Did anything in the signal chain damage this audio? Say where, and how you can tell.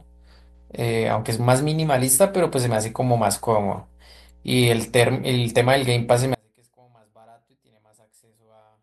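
Yes. The analogue wiring has mains hum: a ground loop or nearby transformer is coupling the 60 Hz power line into the signal. A steady low 60 Hz tone sits under the speech for the whole clip, at about 30 dB below it.

From 6.35 s to the end, the speech abruptly drops by about 36 dB and nearly disappears, leaving only a faint residue. The cause is likely one channel inverted somewhere in the chain, so the identical speech in both channels cancels when they are summed to mono.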